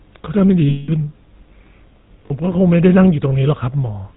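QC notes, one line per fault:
Throughout: GSM full-rate codec at 13 kbps models the vocal tract with sparse pulse excitation and drops everything above 4 kHz, leaving speech plainly buzzy, gravelly and dull.
0.69–0.91 s and 2.26–2.31 s: lost GSM frames, about 200 ms then 40 ms, were filled by repeating the last good frame, so speech holds as a rough metallic ring.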